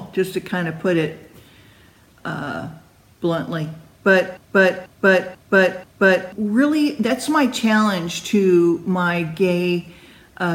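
From 4.37 to 6.32 s the sound falls into a broken-record loop: a 0.49 s fragment plays four times back to back, likely because the playback or stream stalled and resent its last buffer. The waveform and spectrogram show identical blocks tiled end to end, and the intended audio is missing.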